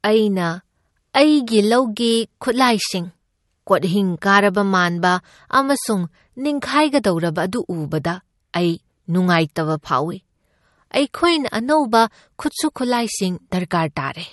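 Throughout, MP3 compression at a starved bitrate near 48 kbps is the likely cause: treble stops at 11.8 kHz and weak detail flickers, sounding watery.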